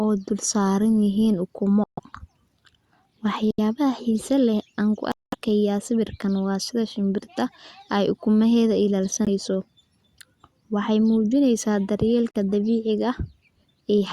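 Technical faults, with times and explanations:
1.84–2.00 s, 3.51–3.60 s, 5.12–5.35 s, 9.25–9.28 s and 12.31–12.36 s: Bluetooth stall. Playback drops to silence for about 138, 77, 208, 18 and 37 ms, right after "dul saaran yihiin ukumo", just before "xiiso leh aan ku", and between "xiiso leh aan ku" and "sawirkan waa sida shimbirta". Each time the sound picks up again after the gap. That points to the headphones' buffer running dry while delayed packets were resent, likely because of radio interference. The gaps are genuine silence, not the smeared or buzzy fill of packet-loss concealment, and they are irregular in length and spacing, unlike a steady clock-driven dropout.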